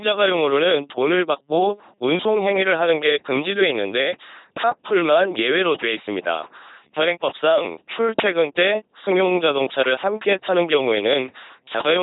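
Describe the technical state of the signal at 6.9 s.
At 6.9 s the speech comes through as a buzzing, mechanical robot voice, with nothing above about 3.9 kHz, and it sounds the same from start to finish. This is LPC-10 vocoder damage, and it is heavy. The vocoder rebuilds the sound by exciting a simple vocal tract filter with either a pulse train or noise, treating each instant as fully voiced or fully unvoiced. The result fits a 2.4 kbit/s LPC-10 encoding.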